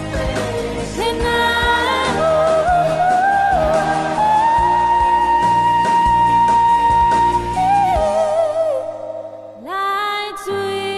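From 0 to 2.0 s the adaptive stream starts at a low bitrate: dull, smeared treble, consistent with roughly 24 kbit/s Opus, then a sudden gapless lift, unlike a dropout-and-reconnect.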